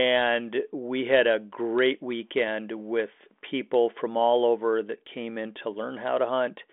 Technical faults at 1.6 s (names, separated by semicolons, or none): none